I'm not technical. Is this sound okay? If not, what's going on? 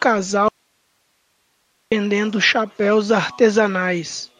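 No. From 0.49 s to 1.92 s the speech cuts out abruptly and only faint hiss remains for about 1.4 seconds. This is an audio dropout to a faint residue, likely a loss of the incoming signal while the recording path stayed live.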